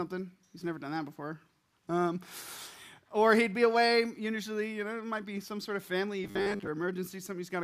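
From 6.24 to 6.67 s the sound turns into a rigid, metallic buzz locked at a steady 100 Hz, still loosely tracing the underlying audio's contour but stripped of its natural movement. This is robotic sound from repeated short buffers, likely caused by audio arriving too slowly: the playback fills gaps by looping the last chunk, which at 100 Hz fits a 10 ms buffer, while about half of the real audio is skipped.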